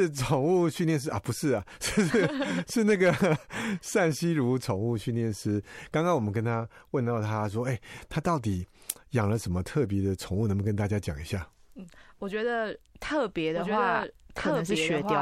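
From 13.56 s to the end, the speech carries a doubled audio track: a second full-band copy trails the original by about one and a half seconds at roughly equal loudness, with no reverb tail or room colouring, and it cuts in abruptly. The likely cause is the same signal arriving again through a slower path. On a spectrogram, the harmonic patterns repeat with a fixed horizontal offset, and the waveform envelope thickens with overlapping bursts.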